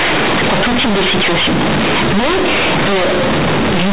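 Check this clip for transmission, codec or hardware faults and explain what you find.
One fault runs through the whole recording: companded audio read as linear. The speech was encoded as G.711 A-law, where each 8-bit value sits on a logarithmic scale, but playback treats those bytes as plain linear 8-bit samples and never expands them. Every change of sign now swings the output across about half its range, so quiet sounds come out as large as loud ones and the waveform is bent out of shape. The result is very loud, buzzy distortion with strong noise filling the pauses, all of it held below 4 kHz by the telephone band.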